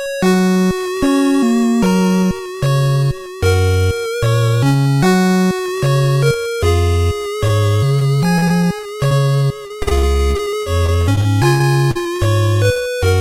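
At 7.47 s, a short concealed packet loss drops about 20 ms. The decoder extends the preceding sound across the hole, leaving a brief smear.

Repeated packet loss (robotic sound) runs from 7.99 to 9.13 s, with gaps up to 38 ms, and again from 9.67 to 12.21 s, with gaps up to 60 ms and about a quarter of that span concealed. Each successive patch makes the sound choppy.

At 12.73 s, another short concealed packet loss covers about 40 ms, smearing the sound briefly and adding a slight delay.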